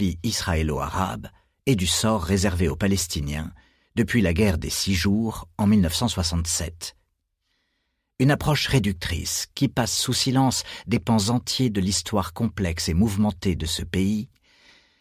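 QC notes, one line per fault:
No faults heard.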